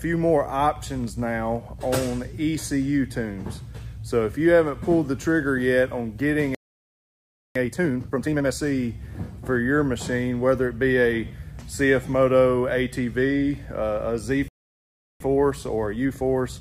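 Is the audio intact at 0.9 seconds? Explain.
Yes, at 0.9 seconds the audio is intact, with no dropout, click, distortion or other fault to be heard at that moment.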